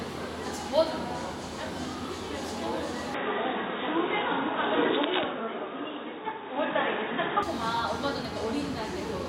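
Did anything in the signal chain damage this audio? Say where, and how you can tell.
Yes, at the input device stage. From 3.14 to 7.43 s the sound turns dull: the spectrogram goes blank above 3.8 kHz, with faint new noise and a level step of about 5 dB, and no gap at either switch. This is likely an input switched to a poorer device.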